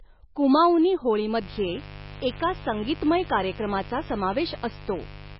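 From the first moment, the speech carries heavy damage that is likely from MP3 compression. Nothing survives above 5.5 kHz, so the treble is sliced off flat, and the remaining sound is watery and swirly, with s sounds turned to metallic chirps and consonant attacks smeared. This points to a very low bitrate, somewhere near 20 kbps, where the encoder starves weak frequency lines. On a spectrogram there is a hard ceiling at 5.5 kHz, with speckled patches below it where components flicker on and off between frames.

At 1.38 s a mains buzz enters and runs to the end of the clip. It is a steady, raspy drone, only about 15 dB below the speech, and it is built on 50 Hz mains. Sharp switching spikes, twice per cycle, from something like a dimmer, rectifier or unshielded cable, feed in a dense series of harmonics. A spectrogram shows evenly spaced horizontal lines at multiples of 50 Hz, climbing upward, and the waveform gains a regular 100 Hz ripple of narrow spikes beneath the speech.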